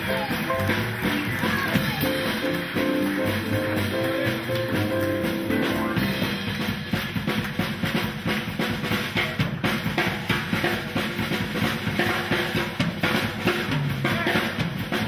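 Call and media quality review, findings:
No call or media quality faults found in this review.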